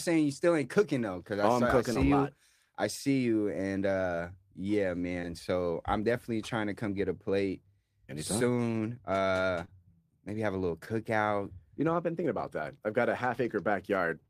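Speech marked by four brief smears or wobbles at 1.93 s, 5.21 s (after "you and uh yeah"), 9.65 s (before "maybe have a little") and 10.85 s (after "maybe have a little"). These are short concealed packet losses: roughly 20 ms of audio arrived too late each time, and the receiver patched the gap by extending the preceding sound.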